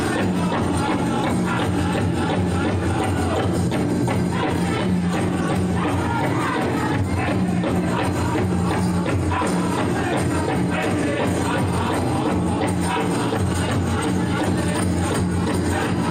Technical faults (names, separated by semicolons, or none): none